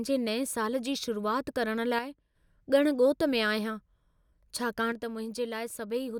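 A likely case of one channel dropping out: one side of the stereo pair goes silent, so the mono sum loses half of the shared signal. Right after "शुरूआति करण", from 1.99 to 2.35 s, the speech suddenly falls by about 6 dB and then jumps back. The same drop returns at 4.92 s and lasts to the end of the clip, leaving the final stretch abruptly quieter.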